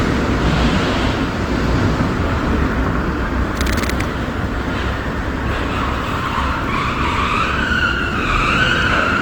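From start to finish the sound is grainy and rough, with tonal parts turned noisy, the mark of Opus compression, likely from its music (CELT) mode at a low rate near 24 kbps. Bands are filled with folded or noisy energy, so a spectrogram shows smeared, speckled texture without clear holes, still reaching about 20.1 kHz.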